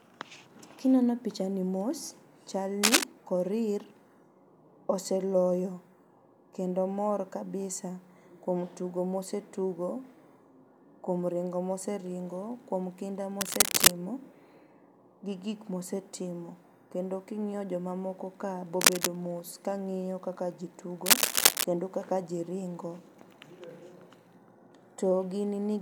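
Cable scratch noise bursts at 2.83–3.05, 13.41–13.92, 18.81–19.07 and 21.06–21.64 s, roughly 10 dB above the speech, likely from a worn cable or connector shifting. They sound like scratchy rustling and show as dense, ragged broadband smears on a spectrogram.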